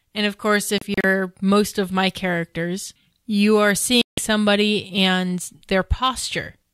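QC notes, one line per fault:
0.78–1.04 s, digital broadcast dropout: after "of course", several short holes of silence totalling 96 ms, the longest 32 ms, scattered over 256 ms. Corrupt frames are muted until good ones return. The waveform shows flat gaps, and the spectrogram shows thin blank vertical strips before "most of my characters".
4.02–4.18 s, digital broadcast dropout: after "my characters you are", the receiver mutes for a single 160 ms stretch, which fits several consecutive frames being rejected. That sound is lost. The waveform shows one flat gap, and the spectrogram shows one clean blank column across all frequencies.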